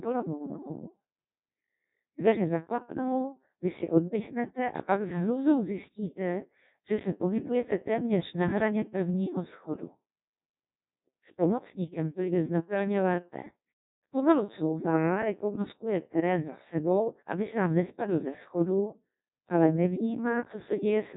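From start to finish the speech sounds robotic and buzzy, with heavy damage and nothing above 3.8 kHz. This is the Codec 2 vocoder, which fits a rate near 1.2 kbit/s: it rebuilds the voice from sine waves using only pitch, voicing, energy and spectral envelope, discarding the original waveform.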